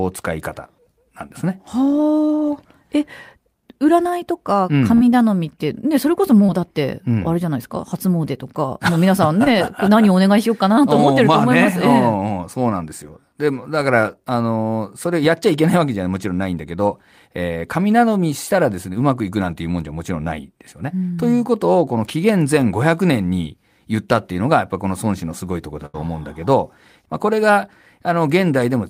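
A burst of packet loss at 4.95 to 5.03 s removes about 60 ms of the speech. The receiver stretches the last sound over roughly 52 ms and fades it down, then jumps ahead, so the stretch between is simply gone.

Short concealed packet loss follows at 6.47 to 6.50 s and again at 9.44 to 9.48 s, each losing about 20 ms. Around 15 to 18 ms is patched by extrapolating the preceding sound and blending back, leaving a brief smear at each join.

A second burst of packet loss at 25.86 to 25.96 s drops about 80 ms. Nearly all of it, some 79 ms, is filled with a decaying continuation of the last sound before the audio resumes further along.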